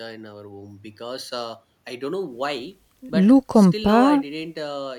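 No technical faults are audible in this recording.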